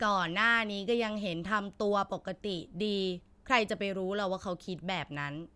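Nothing in this bit of speech stands out as a technical fault; you can just listen through it without anything catching your ear.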